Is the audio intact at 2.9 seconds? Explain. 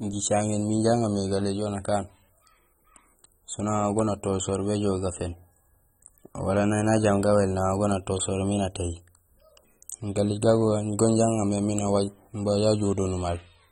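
No, this speech is likely coarsely AAC compressed at a low bitrate, around 24 kbps, throughout. Nothing remains above 16.6 kHz, so it sounds dulled and smeared with audible fizz.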